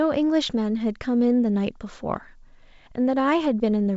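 No faults are audible in the speech; the band ends near 7.7 kHz, with the light upper-band hiss and slightly noisier lower band that fit G.722 wideband telephone coding at 56 kbit/s.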